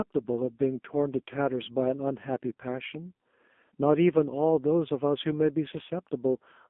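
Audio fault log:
throughout AMR narrowband mobile codec: low-rate mobile coding rebuilds speech from a sparse vocal-tract model, leaving it heavily buzzy and synthetic within 200 Hz to 3.5 kHz, which fits a 5.9 kbps mode.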